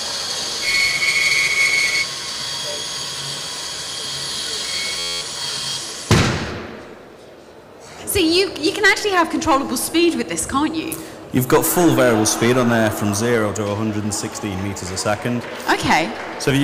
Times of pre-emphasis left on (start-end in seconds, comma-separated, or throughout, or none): none